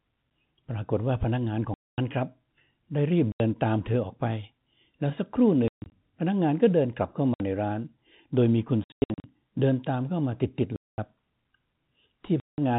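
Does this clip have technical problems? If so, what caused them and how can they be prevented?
Yes, packet loss filled with silence chops the speech at 1.74–1.98, 3.32–3.40, 5.68–5.92, 7.34–7.40, 8.84–9.24, 10.76–10.98 and 12.40–12.58 s. The holes come in whole 20 ms packet steps and have hard edges. Receiver-side loss concealment or forward error correction would smooth them over.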